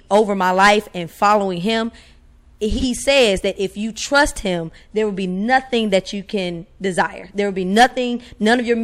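From 2.72 to 2.84 s, just before "says that if you", frames out of order: two adjacent blocks of about 46 ms each were decoded in swapped order, so the speech briefly flutters. Unlike a dropout or repeat, nothing is lost or duplicated.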